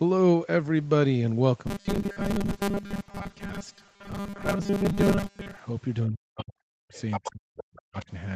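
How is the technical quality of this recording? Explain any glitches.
The recording has three distinct faults, all in the call audio, and two of them cluster in the second half.

From 1.67 to 5.59 s there is robotic sound from repeated short buffers. Audio likely arrived too slowly, so most of it was replaced by loops of the last fragment. The steady 200 Hz buzz points to repeats of about 5 ms. Its fixed pitch sets it apart from ordinary codec roughness.

Between 6.07 and 6.95 s, and again from 7.19 to 8.11 s, the speech is suppressed in double talk. The echo canceller likely mistook overlapping speech for echo and pulled the talker down deeply. The voice sinks and breaks in pieces rather than buzzing.

From 6.94 to 7.32 s and from 7.57 to 7.78 s, the other side's voice leaks through as a second voice well below the talker. The likely cause is loudspeaker echo that the canceller failed to remove. 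This adds sound, whereas suppression takes it away.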